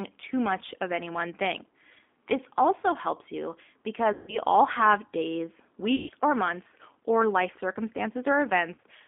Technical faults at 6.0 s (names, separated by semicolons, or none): G.729 codec; VoIP packet loss concealed by the speech codec